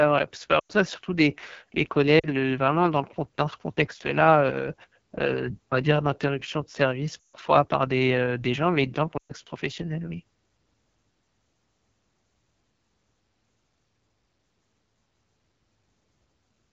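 AMR wideband (HD Voice) codec runs throughout at 8.85 kbit/s, one of its lowest rates. The pulse-driven vocal tract model is starved of bits, so the speech sounds plainly rough and raspy.

Lost AMR speech frames occur at 0.59–0.72 s after "vrai c'est pas", 2.19–2.28 s after "c'est surtout des les", 7.23–7.36 s after "dire d'interruption de service", and 9.17–9.32 s. The decoder repeated the last good pitch and vocal tract settings with falling gain, so each gap smears briefly and fades before the speech returns weak.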